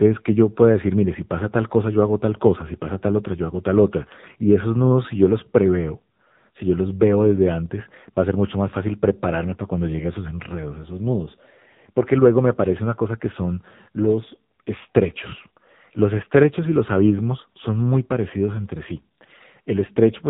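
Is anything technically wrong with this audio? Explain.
Yes. Throughout the speech, the sound is thin, boxed-in and buzzy, with a synthetic edge and nothing above 3.8 kHz. That is heavy AMR narrowband mobile codec damage: the voice is rebuilt from a vocal-tract model driven by sparse pulses, which fits a low bitrate around 6.7 kbps.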